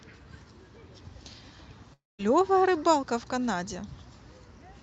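At 1.93 s, incoming packets likely stopped arriving, a long network dropout lasting until 2.21 s. The receiver stretches the last sound into a fading buzz over 251 ms, ending in 200 ms of silence. When speech resumes, 260 ms of it is gone. Before and after the gap, the Opus call path limits the sound to about 8 kHz.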